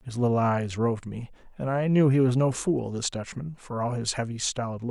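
No technical faults can be heard anywhere in the speech recording; the signal stays continuous and steady in level throughout.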